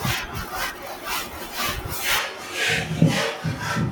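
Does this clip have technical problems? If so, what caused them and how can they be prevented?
Yes. At 2.19 s the speech abruptly turns roomy and hollow, loses bass, and drops by about 5 dB, with room noise sitting roughly 35 dB below the speech until the end. This is likely a switch to a distant microphone after the close microphone's signal failed or was dropped. A plain gain drop would not also thin the low end and bring in room reflections and background noise. Monitoring the close microphone during recording, with a backup recorder on it, would prevent this.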